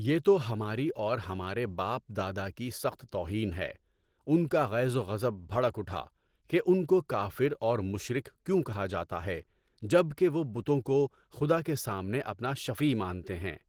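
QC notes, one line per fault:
throughout, Opus compression: the speech has a plainly audible coded quality, muffled and hoarse, with a grainy, noisy edge where finer detail should be. This is likely a low-rate Opus encode, with the sound pointing to roughly 16 kbps in the codec's hybrid speech mode. At that rate the encoder spends most of its bits on the core of the speech and fills the upper bands with folded or noise-like content, although the band itself still reaches about 20.3 kHz.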